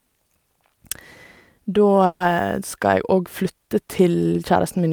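At 2.05 s the speech stalls for about 0.17 s, the last sound stretched into a fading buzz before the talker resumes exactly where they left off, now 150 ms later. This call audio freeze was likely caused by delayed packets draining the jitter buffer.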